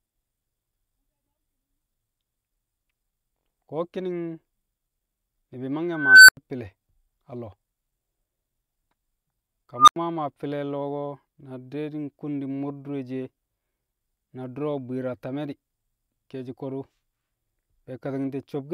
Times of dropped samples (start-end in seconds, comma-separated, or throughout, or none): none